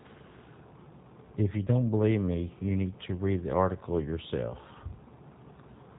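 Speech, passed through the G.729 codec, which points to an 8 kbit/s stream: nothing above 4 kHz survives, and the rebuilt voice sounds plainly rough and synthetic throughout. VoIP packet loss concealed by the speech codec occurs at 1.66 to 1.70 s and at 4.50 to 4.55 s. Each dropout, which fits a single lost 10 ms frame, is bridged by a stretched, fading buzzy tone or coloured noise, and the voice stays weakened briefly afterwards.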